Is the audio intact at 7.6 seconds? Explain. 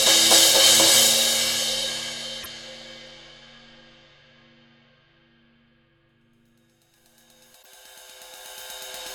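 No. Damaged data in a compressed stream from 7.59 to 7.66 s makes the decoder lose frame sync, giving a brief chirp, squawk, click or short hole, seen as a broadband smear or waveform discontinuity.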